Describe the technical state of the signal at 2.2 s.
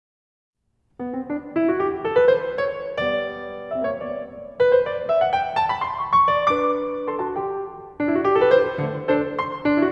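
At 2.2 s the music plays through intact, with no dropout, distortion or other fault to be heard at that point.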